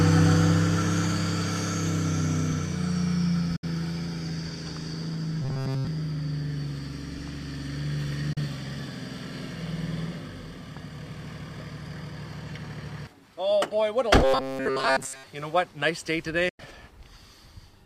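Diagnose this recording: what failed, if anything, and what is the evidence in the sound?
Digital broadcast dropouts at 3.56 to 3.64 s, 8.33 to 8.38 s and 16.49 to 16.60 s, at the reception and decoder stage. Each gap fades out in about 8 ms and stays silent for 64, 32 and 96 ms, which fits whole 32 ms frames failing checks while the receiver mutes.

Robotic sound from repeated short buffers, at 5.42 to 5.87 s and 14.24 to 15.27 s, with a rigid metallic buzz locked at 133 Hz. That points to a chunk of roughly 7.5 ms looping, fully in the first stretch and for most of the second. The likely cause is a starved driver or playback buffer.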